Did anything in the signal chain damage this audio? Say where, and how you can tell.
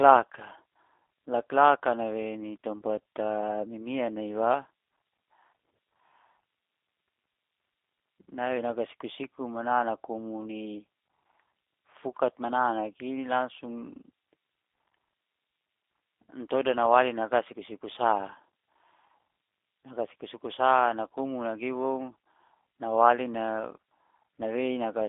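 Yes, at the codec stage: the speech was carried through a G.729 codec, most likely the G.729A variant, across the whole clip. The passband runs from about 300 Hz to 3.6 kHz, which fits an 8 kbit/s G.729-family coder on a narrowband line. The codec rebuilds each 10 ms frame from a vocal tract filter, a pitch predictor and a few coded pulses, so the speech has a plainly audible rough, synthetic edge throughout.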